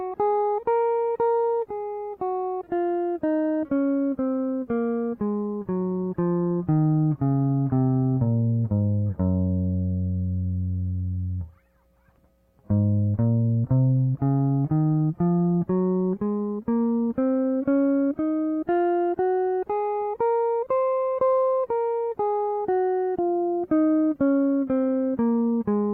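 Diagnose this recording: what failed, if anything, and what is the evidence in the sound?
Nothing here points to a failure at any stage; the music runs along without a single glitch worth flagging.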